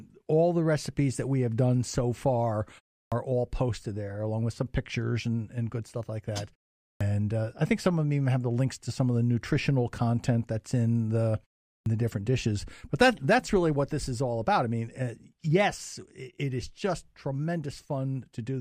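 Speech resumes abruptly with its first sounds missing at 3.04, 6.93 and 11.78 s: a clipped start after a pause, as the output device wakes from sleep and swallows about 80 ms.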